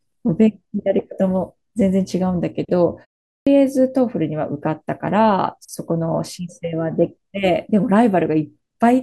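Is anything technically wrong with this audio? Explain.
Yes, there's one clear problem: a clipped start after a pause at 3.38 s. After a short gap of about 0.41 s, the output path seems to have dozed off and needed a moment to wake up again, so roughly the first 86 ms of speech, up to 3.47 s, never makes it out. The phrase pops in abruptly from silence with its opening sounds shaved off.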